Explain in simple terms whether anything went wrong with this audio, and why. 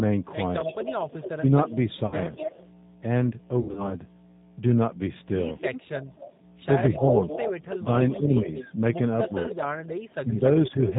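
Several things went wrong with this speech recording.

A steady low hum runs under the whole clip. This is mains hum at 60 Hz. Power-line electricity is leaking into the signal, probably through a ground loop or a nearby transformer. It stays fairly quiet, but it never stops.

The whole clip also passed through the G.729 codec, a low-rate phone codec. It rebuilds the voice from a simple model instead of keeping the real sound. Nothing above 4 kHz survives. The speech sounds muffled, slightly rough and synthetic.

From 0.61 to 2.66 s, a weaker second copy of the voice trails about a quarter second behind. This is an echo leak. The likely cause is a loudspeaker on the far end whose echo canceller let some sound slip back down the line.

Twice the voice suddenly dips in loudness. This is speech suppressed in double talk. The first dip is brief, at about 1.4 s. Between 6.94 and 10.74 s, the voice drops out in patches that add up to about 0.7 s. 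The likely cause is both sides talking at once, which made the echo canceller turn the voice down.

There are two short glitches from VoIP packet loss concealed by the speech codec. The first runs from 2.06 to 2.18 s, with about 60 ms missing. The second runs from 3.61 to 3.96 s, with about 140 ms missing in scattered gaps. The decoder guessed at the missing sound, so the voice turns briefly buzzy or noisy and weak there.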